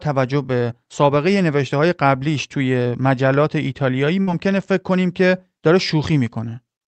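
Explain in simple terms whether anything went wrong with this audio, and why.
At 4.21 to 4.29 s there is a burst of packet loss. A few chunks of the call audio arrived too late or never arrived. The receiver stretched the last sound for about 56 ms and faded it down. Then the speech jumps ahead, with about 60 ms missing.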